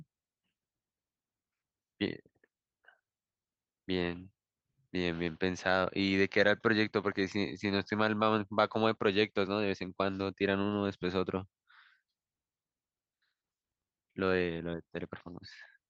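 No technical faults are audible in the speech, and the top end rolling off around 12 kHz fits a call codec's ordinary bandwidth limit on a working call path.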